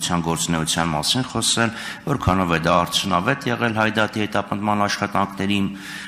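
Nothing to flag: no audible technical faults anywhere in the clip.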